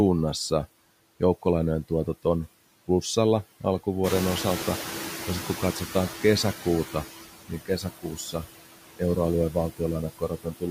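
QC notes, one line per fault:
Throughout: noise suppressor artifacts. Residual background sinks between phrases; bands judged steady noise are pulled down by about 16 dB.
4.03–7.07 s: noise suppressor catching up. Room noise jumps about 14 dB near 4 s and passes through with less reduction at first, then fades over roughly 3 s as the noise estimate adapts.
7.48–8.45 s and 10.19–10.68 s: speech cut by the noise suppressor. Parts of the speech sound swallowed and faint, mistaken for noise and dropped by up to about 16 and 18 dB, roughly 400 ms and 150 ms affected.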